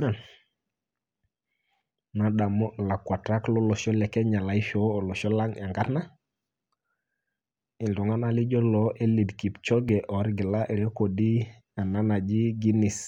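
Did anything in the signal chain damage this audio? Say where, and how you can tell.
Yes, at 9.89 s the speech jumps forward, losing only a few milliseconds, likely a dropped buffer (overrun) at the driver stage. The waveform shows an abrupt step with no gap, and the spectrogram shows a thin broadband vertical line.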